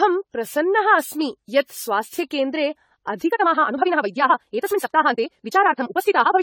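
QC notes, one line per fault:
throughout: generation loss. The speech sounds swirly, hollow and smeared, with soft, blurred consonant attacks, worse than a single encode at this quality would leave. The likely cause is around ten passes through an AAC-LC-style codec near 64 kbit/s, each re-quantising on a shifted frame grid so noise and spectral gaps pile up.
3.27 to 6.42 s: time-stretched section. The pace jumps abruptly to about 1.93 times normal speed while the pitch stays put, so the speech comes across rushed. This is likely stretching software compressing the passage by dropping short slices of audio to hold the pitch steady.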